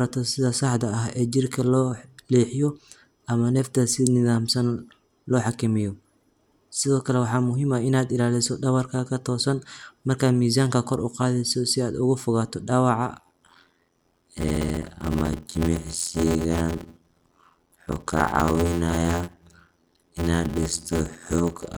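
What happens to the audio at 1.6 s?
Nothing goes wrong at 1.6 s; the speech runs on intact through that moment, with no dropout, click or distortion.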